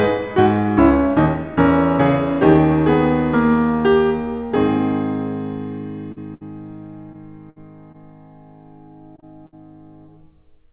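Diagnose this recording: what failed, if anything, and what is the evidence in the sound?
Short concealed packet loss in the network at 6.12, 7.13, 7.92, 9.16 and 9.20 s: the decoder extrapolated the music, leaving brief 13 to 42 ms smears.

A burst of packet loss at 6.34, 7.50 and 9.46 s dropped about 60 ms each time. Concealment holds and fades the last sound before the music resumes further on.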